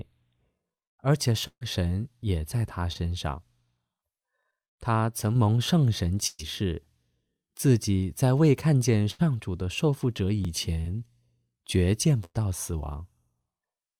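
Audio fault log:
1.47–1.63 s, 6.27–6.41 s, 9.11–9.21 s, 12.25–12.36 s: burst of packet loss. Between 80 and 140 ms goes missing each time. The last sound is stretched into a fading buzz or hiss, falling to silence near the end of the first two. The audio then resumes further on, unlike a brief smear.
2.93–2.97 s, 10.81–10.87 s: short concealed packet loss. About 20 and 40 ms are filled by continuing the previous sound, giving a quick smear or wobble with no gap.
4.43–4.45 s, 10.45–10.47 s: overlapping chunks. A 20 ms piece plays twice where 6-second chunks join, giving a stutter-click at a fixed interval rather than a loss of audio.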